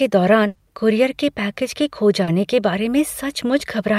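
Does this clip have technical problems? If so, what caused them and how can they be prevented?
Yes. From 0.47 to 0.57 s, just before "कूरियर के", a burst of packet loss drops about 80 ms; the receiver continues the last sound and fades it out before resuming later, unlike a brief smear. Larger jitter buffers and forward error correction prevent it.

At 2.23 to 2.29 s, between "के खो" and "के बारे", a short concealed packet loss leaves a 40 ms smear that blends back quickly, shorter than a held burst. Redundant packets or a more stable network prevent it.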